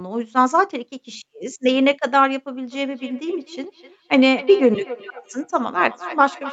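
Speech with a feedback echo between two devices from 2.71 s to the end: each word returns roughly every 300 ms, peaking about 15 dB below the voice, visible as repeated, fading copies of each syllable in the waveform and spectrogram.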